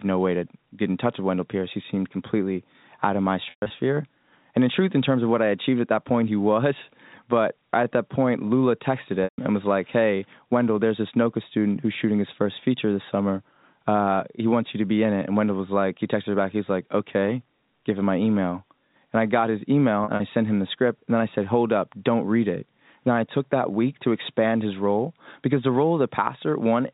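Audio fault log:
3.50–3.70 s, 9.24–9.38 s, 20.04–20.20 s: packet loss with pitch repetition. Losses of 80–160 ms were filled by repeating the last pitch period, giving brief held, buzzy tones that fade.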